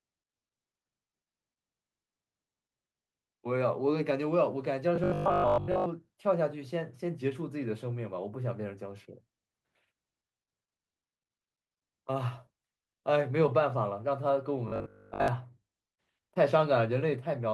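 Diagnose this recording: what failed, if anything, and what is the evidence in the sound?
Robotic sound from repeated short buffers at 4.96–5.86 s and 14.68–15.28 s: a rigid 50 Hz buzz, likely a starved buffer stage looping 20 ms blocks.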